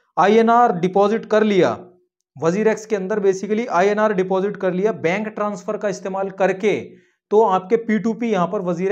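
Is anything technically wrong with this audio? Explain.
No, there is nothing technically wrong with this audio. Nothing heard points to a problem in how the sound was captured, processed or delivered.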